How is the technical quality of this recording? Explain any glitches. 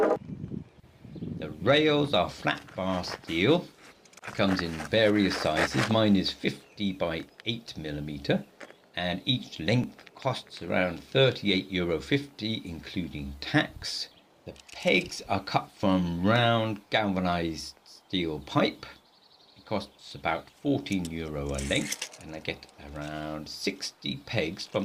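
The recording has three small glitches, at 9.84, 15.83 and 21.82 s. Each is a brief click or tiny skip where the waveform jumps abruptly, evenly spaced about 6 s apart. This is an overlap between stream segments: the audio arrives in 6-second chunks whose time stamps overlap slightly, so at each boundary the player trims the overlap from sound that was never actually duplicated. A sliver of audio disappears, leaving a discontinuity heard as a tiny skip.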